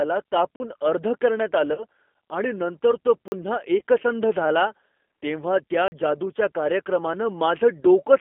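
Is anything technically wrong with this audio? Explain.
Yes. Three kinds of fault can be heard in this speech clip.

Throughout, the speech sounds thin, slightly rough and synthetic, limited to roughly 250 Hz to 3.5 kHz. This is the G.729 codec at 8 kbit/s. It rebuilds each 10 ms frame from a vocal-tract filter, a pitch predictor and a few pulses, and the damage is plainly audible.

At 0.56 s, 3.28 s just after "आणि नंतर तो", and 5.88 s just after "झाला तेव्हा त्या", the sound drops out for 40 ms. Each is a block of digital silence. Samples were replaced by zeros with no fade in or out, which likely means the output buffer wasn't filled in time.

At 1.74 to 1.84 s, just before "आणि नंतर तो", and at 3.78 to 3.82 s, the speech briefly smears into a buzzy tone or coloured noise that fades. This is VoIP packet loss concealed by the speech codec. About 30 ms of audio went missing each time, which fits a single lost packet. 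The decoder extrapolated from its last pitch and filter while lowering the gain, so the sound stays weakened until the decoder recovers.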